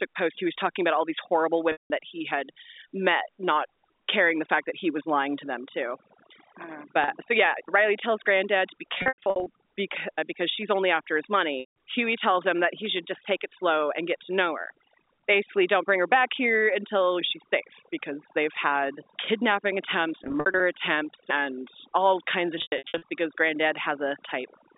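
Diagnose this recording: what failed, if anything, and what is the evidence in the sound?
Overdone noise removal runs throughout, at the call-processing stage. A suppressor set too hard pulls bands near its noise estimate to silence, leaving the background broken into twinkling specks.

Packet loss with pitch repetition in the network at 1.72, 7.04, 8.98, 11.6, 20.24 and 22.58 s. The receiver repeats the last pitch period, so short gaps buzz and longer ones, such as the 180 ms at 1.72 s, fade to silence.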